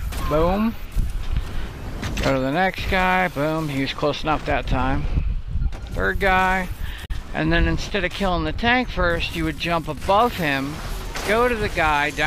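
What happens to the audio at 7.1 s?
At 7.1 s you're catching the tail of a brief glitch from damaged data in the compressed stream, running from about 7.02 to 7.10 s. The decoder hits corrupted frames, loses sync and hunts for the next header, so you get a short chirp, squawk, click or hole.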